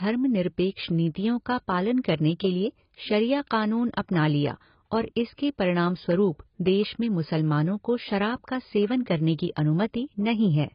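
Speech throughout that sounds dull, smeared and fizzy, with nothing above 5.2 kHz and warbling sibilants, likely from heavy AAC compression at a very low bitrate, around 16 kbps.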